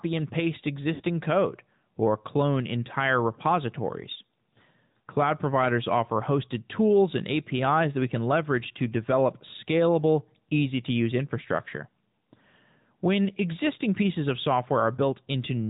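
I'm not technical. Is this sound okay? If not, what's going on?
No. The whole recording has passed through the AMR narrowband mobile codec, the phone-call speech format. Everything above 4 kHz is cut off, so the speech sounds muffled and boxed in, with a plainly audible synthetic, processed edge. Unlike simple muffling, it has that artificial quality of an old mobile call.

From 0.94 to 1.02 s, right after "and paste" and before "code or clone entire", there are lost AMR speech frames: about 60 ms of the call never arrived. Rather than leaving a silent gap or a click, the phone decoder stretches the last sound and lets it fade, so you hear a brief smeared, warbly dip before the speech comes back, weak or rough for a moment.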